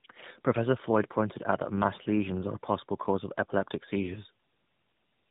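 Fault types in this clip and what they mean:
Tandem speech coding: The speech passed through two separate speech codecs in a row, GSM full rate at 13 kbit/s and then AMR-NB at 12.2 kbit/s, with a G.711 mu-law link between them. At each border it was decoded and coded again. The second coder had to model sound the first had already damaged. The result is rough, muffled and warbly. Nothing remains above 3.8 kHz, so the top end sounds dull.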